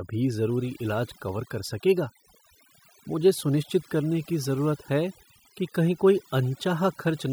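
From start to finish, the speech shows overdone noise removal. The denoiser was pushed so hard that any frequency band sitting close to its idea of the noise floor gets pulled way down or cut out entirely, and the softer parts of the voice get dragged under along with the noise. So the gaps fall to a near-dead hush dotted with little sparkly blips.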